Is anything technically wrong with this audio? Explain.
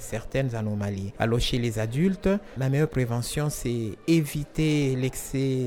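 No, no technical faults present.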